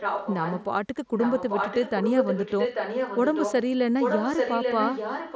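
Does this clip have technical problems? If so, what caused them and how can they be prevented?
Yes. Echo leak at 0 to 0.65 s, 1.15 to 3.7 s and 4.0 to 5.36 s: speech repeats about 0.84 s late, about 5 dB quieter, then equally loud, likely from a loudspeaker whose echo canceller missed it. Prevent it by using a headset or proper echo cancellation at that end.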